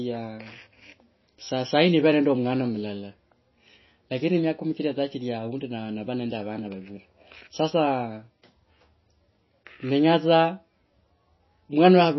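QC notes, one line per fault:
Throughout, MP3 compression (likely cause): speech stops dead above 5.8 kHz and carries a plainly audible watery swirl as weak frequency lines flicker on and off between frames. The swirl sets it apart from a simple low-pass filter, and points to roughly 24 kbps.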